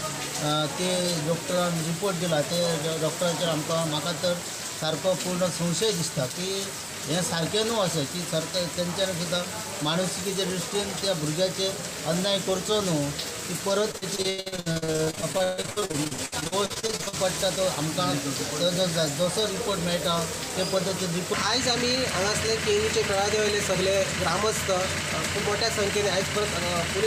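Repeated packet loss (robotic sound) runs from 13.91 s to 17.15 s. Over these three seconds packets keep arriving late or not at all, and each hole is patched by stretching out the last sound received. The next dropout follows almost at once, so close to half the stretch is concealment. The audio turns choppy, pieces go missing, and the longest gap lasts about 139 ms.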